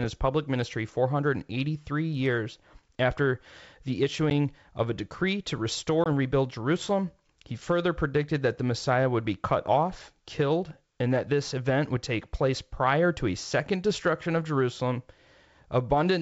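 Packet loss on the ADPCM call dropped about 10 ms at 4.30–4.32 s after "years after the" and 20 ms at 6.04–6.08 s after "of a decree to". Each left a hard-edged silent gap. The decoder's predictor and step size then lost track of the sender's, so the speech returned with some distortion that settled within tens of milliseconds.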